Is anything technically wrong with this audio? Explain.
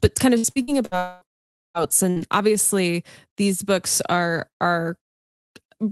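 Yes. Packet loss and dropouts on the call path break up the first two-odd seconds of this speech.

From 0.37 to 0.94 s, just after "but kind of", there is repeated packet loss, heard as robotic sound. Four separate gaps, the longest 63 ms, lost about 240 ms of audio. Each was patched by extending the previous sound, so around 42% of the stretch is synthetic and choppy.

Two long network dropouts follow, likely caused by audio failing to arrive at all. From 0.97 to 1.24 s, about 240 ms is missing and is covered entirely by a continued, fading buzz or hiss. From 1.33 to 1.77 s, about 420 ms is lost. The concealment dies away into silence, and the speech resumes later with that stretch gone.

At 2.10 to 2.19 s, a burst of packet loss drops about 60 ms just before "obviously these books are". The receiver holds and fades the last sound across the gap, leaving a brief smear and a small skip.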